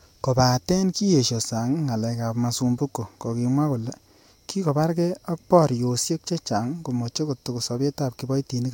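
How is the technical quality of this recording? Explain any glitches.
Nothing stood out on listening to this recording, so there are no glitches to explain.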